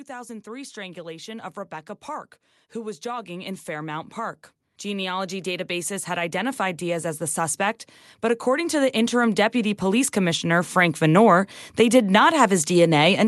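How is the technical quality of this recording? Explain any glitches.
The recording has two stretches of automatic gain rising. They sit on a call path whose high end stops at about 12 kHz, consistent with Opus coding.

Automatic gain rising runs from 0.07 to 1.53 s, climbing about 4 dB. It happens again from 2.05 to 11.28 s, climbing about 17 dB and ending just before "they did". The gain control judged the input too quiet and kept raising its gain, so the voice and background noise swell together gradually.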